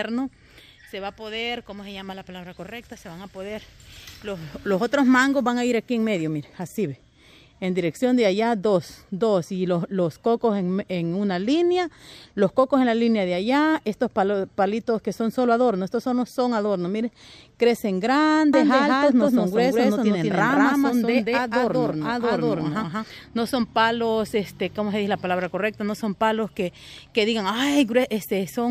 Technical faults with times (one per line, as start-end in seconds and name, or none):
18.54-23.04 doubled audio track